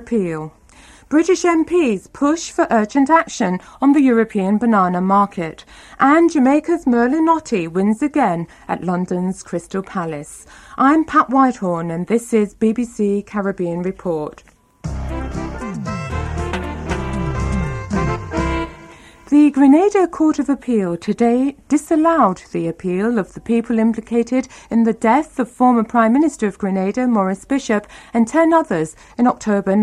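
No technical faults are audible.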